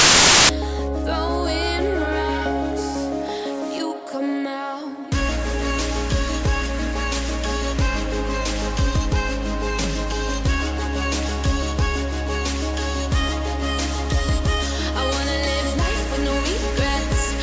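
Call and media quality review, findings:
File tags played as audio, 0.00 to 0.49 s. Very loud white-noise burst, hard edges. Embedded cover picture's compressed data decoded as samples. Suspect file parser.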